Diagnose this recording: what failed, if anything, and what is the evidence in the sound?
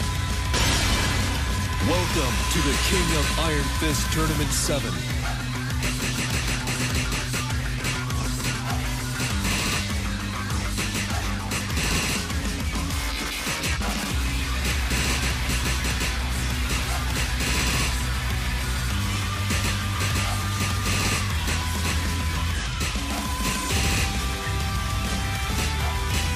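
Nothing in this recording points to a failure at any stage, so there's no fault to diagnose here.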